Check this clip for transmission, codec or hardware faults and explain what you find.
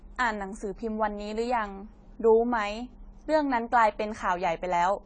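The speech carries one codec fault, present from start to finish: AAC compression, likely AAC-LC at a low bitrate in the region of 24 kbps. Starved of bits, the encoder quantises its frequency lines coarsely and discards whatever the hearing model rates least important, including everything above 9.4 kHz. The speech sounds dull and plainly damaged, with a warbling texture on sustained vowels and sibilants turned fizzy and smeared.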